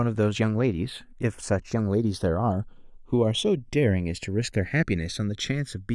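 Throughout the speech, the channels are drifting apart: the left and right signals come from devices running on separate clocks that disagree by roughly 100 parts per million, so the delay between them creeps steadily upward, reaching around half a millisecond by the end. Heard in mono, the two copies combine into comb-filter notches that glide slowly across the spectrum, giving the voice a gradual, sweeping flanging.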